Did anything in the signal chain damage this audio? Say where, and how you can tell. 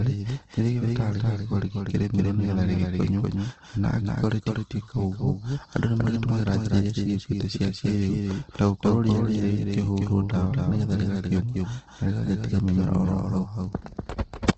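Yes, two things. Right through the speech there's a second full-band copy trailing the first by about a fifth of a second, a few dB quieter (around 5 dB down). It's a clean repeat with no decay or room colour, so it's not reverb. This is a doubled audio track, most likely from the same signal being picked up twice somewhere in capture or routing, with one path running slower than the other.

The whole clip also carries Opus compression damage, plainly audible throughout. Tonal parts of the speech come out grainy and rough rather than swirly, which fits the CELT mode filling starved bands with folded or noise-like content instead of leaving holes. Nothing is present above 8.2 kHz, so it's running at wideband. That combination points to a low bitrate, somewhere around 16 kbps, as the likely cause at the codec stage.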